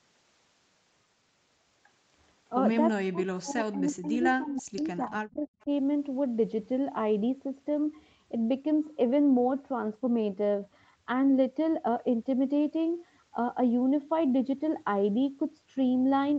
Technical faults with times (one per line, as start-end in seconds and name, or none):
2.95-5.70 speech suppressed in double talk